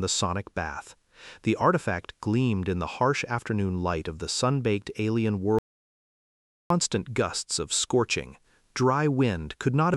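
An audio dropout to silence runs from 5.59 to 6.70 s, about 1.12 s of silence with no room tone. The input was likely lost while recording continued, so the sound cuts off abruptly and resumes mid-flow, with that stretch missing.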